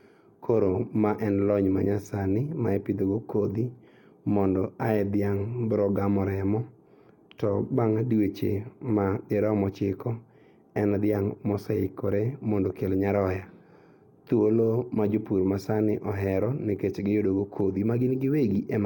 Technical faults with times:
none

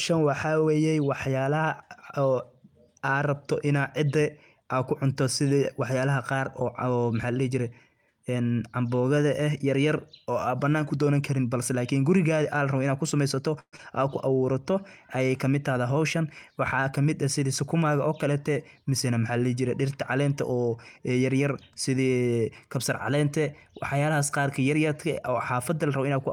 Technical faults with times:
13.59-13.80 long network dropout
14.29-15.25 jitter buffer slow-down
15.88-17.85 jitter buffer speed-up

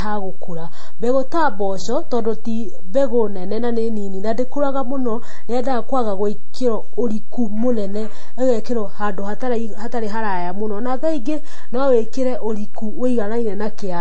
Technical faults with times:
0.00-14.01 DC offset
0.00-14.01 transcoding between lossy codecs

